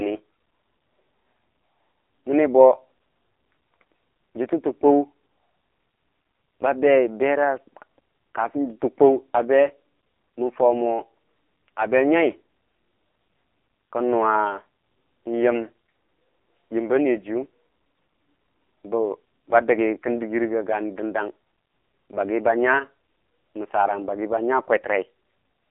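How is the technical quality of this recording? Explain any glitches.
The technical quality is poor throughout: the whole speech recording carries AMR narrowband mobile codec damage. The band runs only from 300 Hz to 3.4 kHz, and heavy low-bitrate vocal-tract modelling leaves voices buzzy and synthetic. That points to a mode around 5.9 kbps. A spectrogram shows a flat ceiling at 3.4 kHz and an empty floor below 300 Hz.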